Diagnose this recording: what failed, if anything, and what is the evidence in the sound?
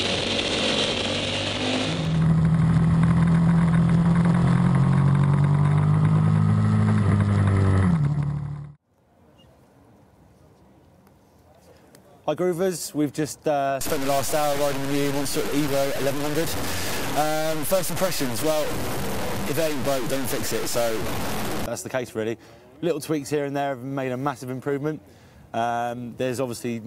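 Sample-format conversion likely failed: from 13.81 to 21.66 s the sound turns grainy, signal-following distortion only about 10 dB down, consistent with truncation to 4 bits without dither.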